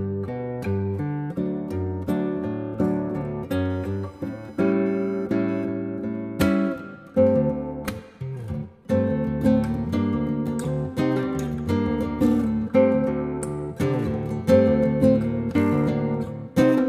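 From 3.65 to 5.65 s, computer activity noise: computer load disturbs the shared ground, giving a faint buzz around 1 kHz, a thin spectrogram line.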